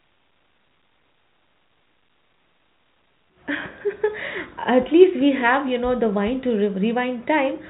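Nothing stood out on listening to this speech, which carries the narrow, telephone-band sound of G.711 coding.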